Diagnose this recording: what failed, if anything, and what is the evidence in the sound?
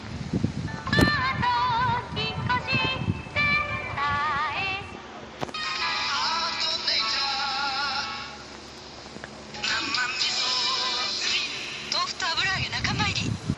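Codec stage: dull, gurgly, granular sound throughout, with upper bands flickering out. That's likely MP2 compression starved of bits, fitting something around 80 kbps.

DAB burbling on the reception side: short noise blips and sub-band level jumps at 1.96–2.09 s and 8.56–9.13 s, where a small bit error rate slipped corrupted scale factors past error correction.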